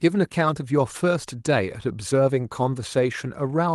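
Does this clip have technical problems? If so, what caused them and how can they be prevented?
No, this clip does not have technical problems, so there is nothing to prevent.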